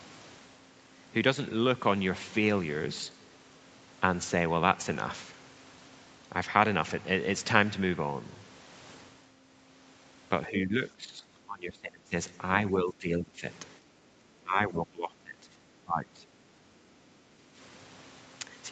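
Speech suppressed in double talk at 10.47–11.25, 11.46–12.14, 12.71–13.46, 14.43–15.51 and 15.84–16.28 s: the speech sinks by roughly 15 to 25 dB in pieces, likely because an echo canceller mistook overlapping far-end talk for echo and turned everything down.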